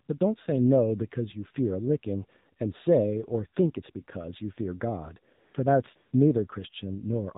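The whole speech clip has gone through the AMR narrowband mobile codec. Nothing gets past 4 kHz, and the voice sounds clearly buzzy and synthetic, which fits the low 7.4 kbps mode. Then AMR comfort noise fills short pauses from 5.34 to 5.54 s and from 5.96 to 6.12 s. No speech frames were sent there, so a smooth artificial hiss switches in and out in place of the real background.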